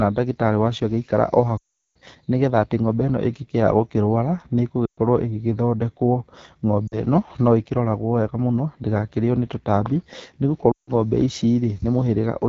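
Speech carried over the AMR wideband (HD Voice) codec, with a plainly rough, raspy texture throughout that fits one of its lowest rates, around 8.85 kbit/s. Unlike broadband hiss, the grain follows the voice itself, and the top band sounds like shaped noise rather than detail. Lost AMR speech frames occur at 1.57 to 1.97 s, 4.86 to 4.98 s, 6.88 to 7.00 s and 10.71 to 10.91 s. They differ from hard dropouts because the decoder holds the last pitch and vocal tract shape, so the sound smears and fades instead of cutting. The longest, about 0.38 s, sinks to near silence, and the voice then returns weak and rough.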